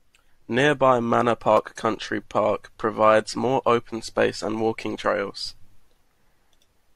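A speech recording with a regular click running through it. From 0.44 s to 6.12 s, a short pop recurs every 1.14 s, roughly seven in all. These are likely clock drift buffer slips: two clocks differing by about a tenth of a percent, forcing a small block of samples to be dropped or repeated.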